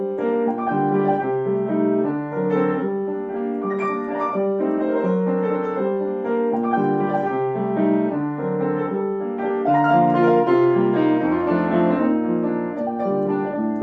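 No technical faults can be heard at any point in the clip. The audio carries on steadily from beginning to end with nothing that calls for comment.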